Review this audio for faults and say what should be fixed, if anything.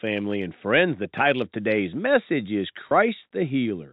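Packet loss with pitch repetition at 2.89 s. About 20 ms is missing, consistent with two lost packets. The receiver repeats the last pitch period, giving a brief, buzzy hold. Adding jitter buffering or forward error correction on the G.711 telephone link would prevent this.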